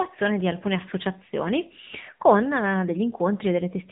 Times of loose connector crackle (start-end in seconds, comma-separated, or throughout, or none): none